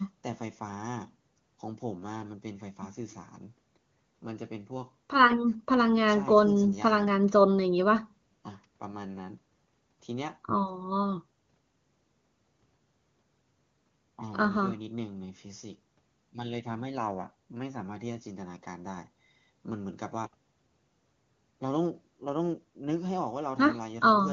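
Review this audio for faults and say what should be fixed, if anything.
No faults turned up in this speech recording, so nothing needs to be fixed.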